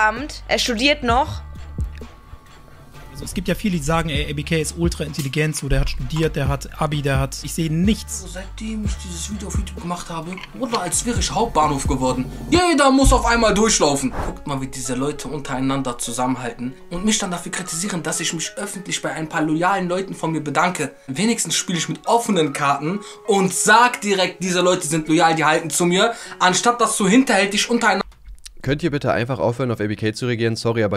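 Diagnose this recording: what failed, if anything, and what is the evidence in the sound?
Nothing failed: no stage in the chain leaves any audible evidence of a fault anywhere in the recording.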